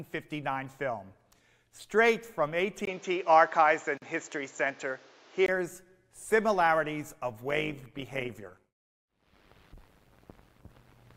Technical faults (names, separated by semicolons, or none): input switched to a poorer device; gap at a join of encoded pieces; overlap-add ripple